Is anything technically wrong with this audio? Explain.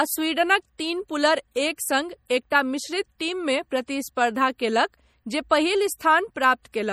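Yes. Throughout the speech there is plainly audible MP3 compression, likely at a low bitrate near 48 kbps. Starved of bits, the encoder drops quiet frequency detail that flickers between frames. That gives a watery, swirly texture, with chirpy sibilants and softened consonant onsets.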